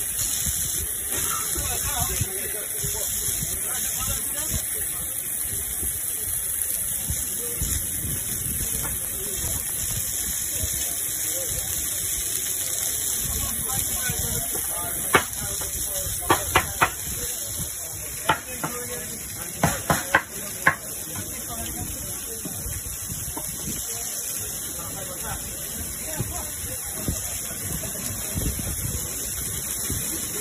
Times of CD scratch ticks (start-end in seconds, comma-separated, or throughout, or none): 8.83-9.91